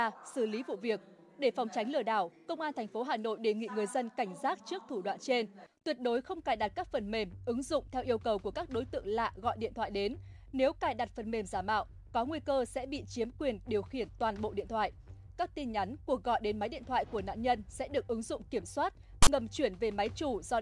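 At 19.23 to 19.28 s, file tags played as audio: a block of text metadata with zero padding is decoded as samples. It sounds like a harsh, hard-edged rasp that cuts to dead silence. On the waveform, a lopsided offset burst meets a flat line; the spectrogram shows a sharp-sided broadband slab.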